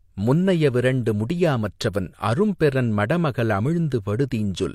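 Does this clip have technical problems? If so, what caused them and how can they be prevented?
No, there are no technical problems to point to in this clip. With nothing going wrong, there is no cause to trace and nothing that needs preventing.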